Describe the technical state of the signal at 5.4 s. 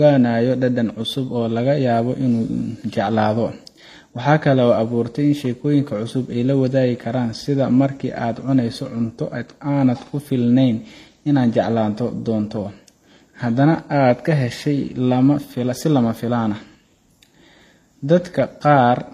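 At 5.4 s the speech has a layered, smeared coarseness: artefacts from the different codec stages are heard together, and nothing is present above 14.9 kHz. The same texture runs through the whole clip. The likely cause is transcoding between lossy codecs. The sound fits a low-bitrate HE-AAC encode, around 24 kbit/s, later re-encoded as MP3 at about 64 kbit/s. The MP3 stage spent bits reproducing the earlier artefacts and added its own.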